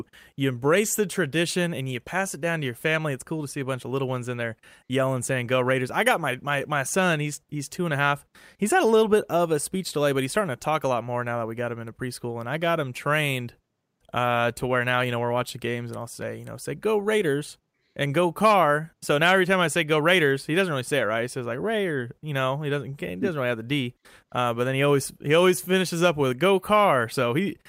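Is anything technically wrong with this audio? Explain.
No, nothing technically wrong is audible anywhere in this speech recording.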